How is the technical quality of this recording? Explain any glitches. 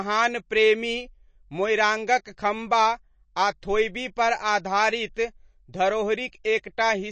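Technical quality is fairly poor, with audible damage all the way through and one small glitch near the end.

Across the whole recording the speech sounds watery and a bit swirly, and nothing comes through above about 8.3 kHz, so the top end is dull and the s sounds lack their usual sparkle. That's most likely MP3 compression at a low bitrate, somewhere around 32 kbps. When the encoder runs short of bits, it cuts the treble at a fixed point and drops weak frequency detail, which flickers in and out from frame to frame.

At 6.44 s there's a brief pre-echo, a short hiss smeared about 10 ms ahead of a sharp attack, so the onset sounds softened rather than crisp. It comes from the same codec. The quantisation noise is spread across the whole block, and because the attack lands late in that block, the noise meant for the loud part leaks into the quiet moment just before it.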